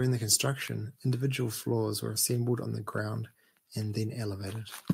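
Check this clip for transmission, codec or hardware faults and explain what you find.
No fault turns up anywhere in this speech recording. There is nothing here that needs explaining.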